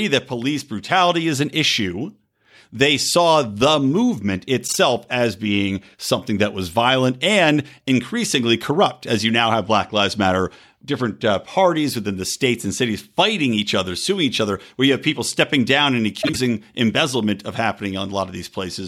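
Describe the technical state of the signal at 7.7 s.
At 7.7 s the speech signal is intact, with no dropout, click, clipping or other fault present at that moment.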